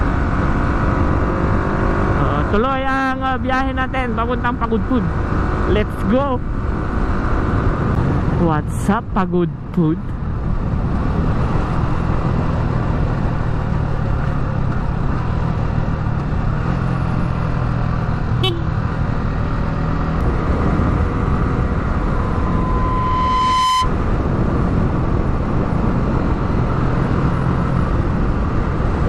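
At 22.00 s a microphone starts picking up the loudspeaker it feeds, and around 1 kHz the gain around that loop climbs past unity, producing loudspeaker feedback squeal. The tone reinforces itself on every pass, swelling over roughly a second and a half into a pure, piercing whistle that reaches about the same loudness as the rest of the audio. It ends at 23.92 s, as though the loop was broken.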